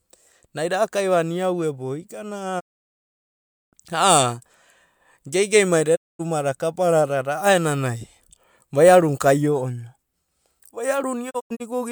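The speech fades to silence within about 20 ms at 2.59 to 3.75 s and 5.95 to 6.21 s, then in short scattered holes from 11.29 to 11.72 s. This is digital broadcast dropout: the receiver muted on lost frames.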